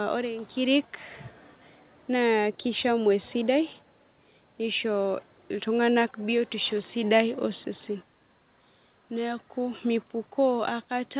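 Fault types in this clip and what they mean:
Nothing stood out on listening to this speech, which carries the narrow band of a telephone-style call path with no content above 4 kHz.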